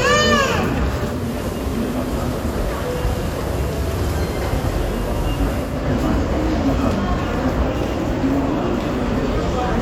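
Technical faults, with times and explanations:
1.03 to 5.88 s, digital radio blending to analogue: the receiver lost its digital stream and cross-faded over about 273 ms to the FM broadcast, so the sound drops about 2 dB and gains hiss roughly 20 dB below the signal until it returns.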